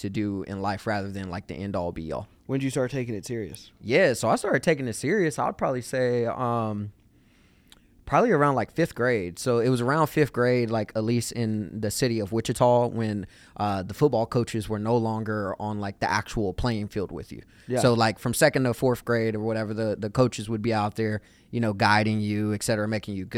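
At 3.55 s, between "you start taking it" and "yeah so i started", a sharp snap or tight cluster of clicks, peaking around -25 dBFS, sits on top of the speech. This is likely an electrical switching spike: a nearby switch, motor or static discharge arcing briefly and coupling into the audio line.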